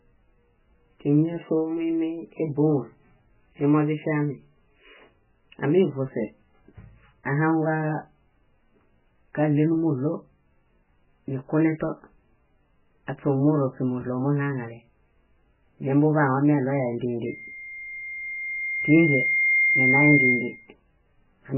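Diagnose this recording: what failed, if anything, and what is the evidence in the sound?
The whole clip sounds watery and swirly, with the speech band-limited to nothing above 3 kHz and attacks smeared. This points to the codec stage, likely heavy MP3 compression at a very low bitrate, around 8 kbps. Plain filtering would lose the treble without the shifting, bubbling texture.

From 17.26 s to 20.75 s a single tone at 2.1 kHz swells over about two seconds to a few decibels above the speech. This is loudspeaker feedback squeal in the acoustic loop between microphone and speaker, where loop gain exceeded one. Unlike hum or a codec artefact, it is one pitch that grows by itself.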